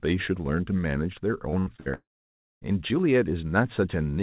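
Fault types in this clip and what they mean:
Repeated packet loss (robotic sound): A run of short holes in the audio between 1.5 and 1.88 s, each patched by repeating the sound just before it. There are four gaps, the longest 71 ms, and about 45% of that stretch is filled-in sound, so the speech turns choppy. A spectrogram shows blocks of frozen, smeared harmonics with hard vertical edges, all below 4 kHz. The waveform shows short copied cycles.
Long network dropout: From 1.94 to 2.63 s about 0.68 s of speech is gone. A brief buzz continues the last sound and fades, then roughly 0.59 s of near silence follows before speech resumes partway along, with the missing part skipped. The likely cause is a stretch where no packets arrived at all. The spectrogram shows a fading smear, then an empty band. The waveform shows a tapering tail, then a flat line.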